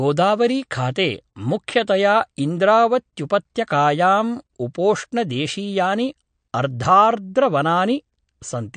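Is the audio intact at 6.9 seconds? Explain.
No. At 6.9 seconds the speech carries damage that runs through the whole clip and is most likely MP3 compression, at a rate that points to roughly 55 kbps. Short of bits, the encoder cuts all content above 9.1 kHz and drops weak frequency lines that flicker on and off between frames, giving a watery, swirly tone with chirpy s sounds and smeared onsets. A spectrogram shows a hard ceiling at 9.1 kHz and speckled, patchy holes in the upper bands.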